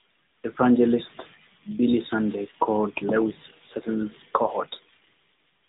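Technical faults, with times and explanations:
Throughout, AMR narrowband mobile codec: speech sounds muffled and buzzy with nothing above 3.8 kHz, the synthetic edge fitting a roughly 10.2 kbps mobile-phone encoding.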